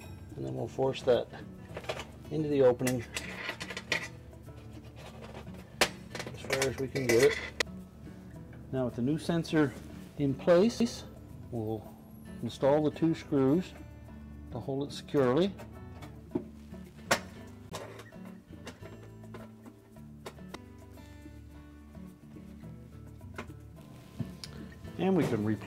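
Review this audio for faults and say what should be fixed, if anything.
CD skips at 10.80 s, 17.70 to 17.72 s and 20.55 s: the laser jumped tracks, muting briefly and resuming elsewhere, heard as ticks and jumps. Re-rip on an isolated drive with error-correcting extraction.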